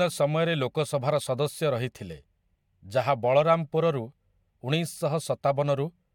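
No technical faults can be heard anywhere in this recording.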